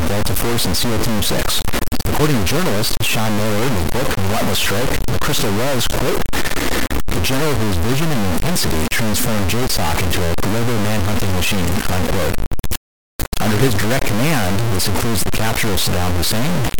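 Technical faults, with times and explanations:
Throughout, low bit depth without dither: the speech is coated in a harsh, grainy distortion nearly as loud as the speech itself, which swells and shifts with each syllable and vanishes with the sound, so quiet tails sputter or cut to dead silence. The likely cause is truncation to about 3 bits. Unlike dithered requantisation or a steady hiss, the error follows the speech rather than sitting underneath it as a constant noise floor.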